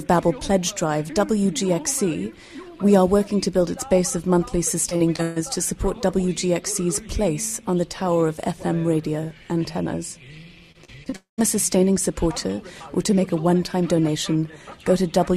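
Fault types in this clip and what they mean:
Repeated packet loss (robotic sound): choppy stretches from 4.89 to 5.38 s and from 10.72 to 11.14 s, each broken four times, the longest break 133 ms. Audio kept failing to arrive, and each hole was patched by stretching the last sound, so pieces go missing.
Long network dropout: right after the second choppy stretch, at 11.16 s, the sound smears into a fading buzz for about 0.2 s, about 0.14 s of it silent, before resuming with a piece gone. Likely an interval when no audio arrived at all.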